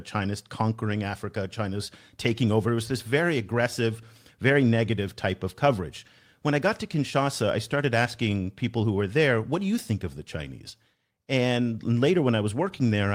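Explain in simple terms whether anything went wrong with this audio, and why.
Nothing went wrong with this audio, because no technical fault can be heard anywhere in the recording.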